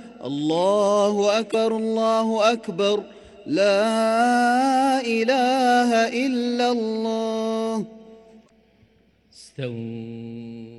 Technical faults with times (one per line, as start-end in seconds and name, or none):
1.48-1.55 damaged data in a compressed stream
8.43-8.50 damaged data in a compressed stream